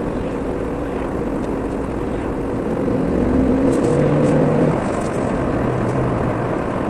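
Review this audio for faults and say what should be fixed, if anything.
No faults found; nothing to fix.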